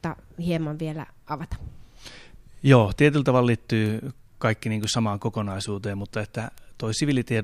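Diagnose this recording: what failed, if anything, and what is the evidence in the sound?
Three isolated bit error spikes occur in this speech, at 3.86 s, 4.84 s and 6.58 s. Each is a single sharp tick with energy spread across the whole spectrum and no relation to the speech around it. The spikes reach about -18 dBFS, -12 dBFS and -18 dBFS. The first and third last one sample and the second lasts two. This points to digital corruption in memory or on a digital link: a flipped bit throws a sample off by a power of two, and it returns at once.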